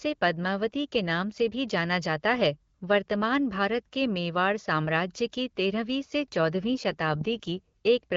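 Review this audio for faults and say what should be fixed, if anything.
An AMR rate drop runs from 6.54 to 7.61 s, just after "तेरहवीं से". For about one second the speech turns rougher and more synthetic. The band stays the same and nothing drops out. The roughness fits the AMR-WB codec falling from 12.65 to 8.85 kbit/s, moving bits from speech detail into error protection on a weak radio link. Clarity returns as the rate recovers. Improving radio coverage or signal strength at the handset would prevent it.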